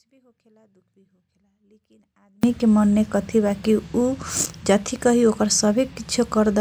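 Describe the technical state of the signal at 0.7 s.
Audio dropout to a faint residue, already under way when the clip begins and lasting until 2.43 s. The wanted speech is likely lost upstream while the path after the break stays live, leaving only faint sound about 40 dB below normal level.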